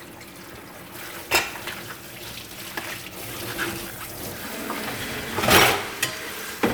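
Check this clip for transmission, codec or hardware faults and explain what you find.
No faults detected in this audio.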